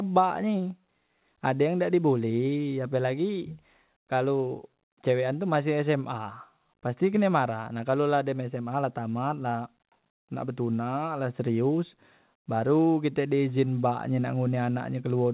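No technical faults can be heard in the speech. It has come through a working call path, and with nothing above 4 kHz it has the narrowband sound of a telephone line, which fits G.711 mu-law at 64 kbps.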